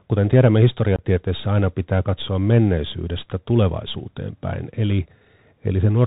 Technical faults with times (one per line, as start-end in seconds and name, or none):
0.00-6.07 Bluetooth CVSD headset codec
0.96-1.03 unconcealed Bluetooth headset packet loss